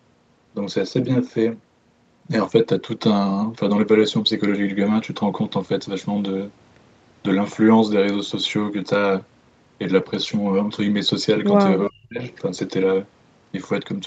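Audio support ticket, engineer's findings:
Echo leak, 11.81–11.87 s: brief delayed copy of the speech, about 10 dB below the direct signal, lagging 351 ms. Likely far-end loudspeaker pickup not fully removed by the echo canceller. Spectrogram: faint, time-shifted repeat of earlier harmonic pattern. Waveform: low-level ghost burst.

Speech suppressed in double talk, 11.89–12.21 s: near-end speech attenuated, deepest drop about 35 dB, roughly 0.3 s affected in total. Likely echo canceller's suppressor turning down both talkers during overlap. Spectrogram: harmonics fade to near-blank patch. Waveform: envelope collapses toward silence, then recovers.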